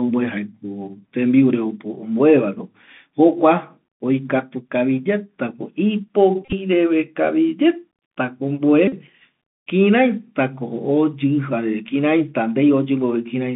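All the way through, the speech has that Bluetooth CVSD headset codec sound, and the damage is plainly audible. The band runs only from about 150 Hz to 3.5 kHz, which points to the 64 kbps one-bit delta coder. Its step size can't keep up with loud, bright sounds, so sibilants come out scratchy over a grainy hiss.

Then come two bursts of Bluetooth headset packet repeats, where the chip replays the last packet's bits. From 6.45 to 6.53 s, about 52.5 ms is lost, scattered over 75 ms, with the longest stretch around 30 ms. At 8.88 to 8.94 s, 45 ms goes, which fits a dozen packets. Each run buzzes near 267 Hz.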